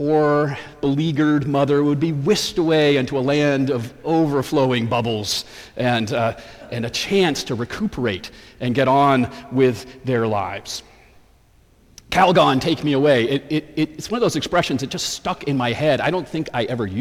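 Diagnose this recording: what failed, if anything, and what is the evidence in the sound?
Nothing in this recording points to a failure at any stage, from the analogue wiring through conversion and processing to playback. There are no dropouts, discontinuities, distortion or level jumps that would count as evidence of a fault.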